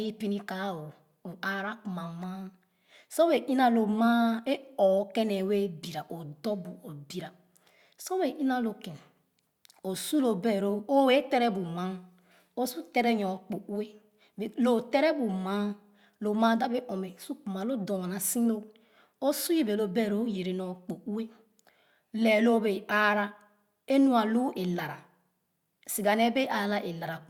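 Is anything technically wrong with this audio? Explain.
No, nothing technically wrong can be heard here.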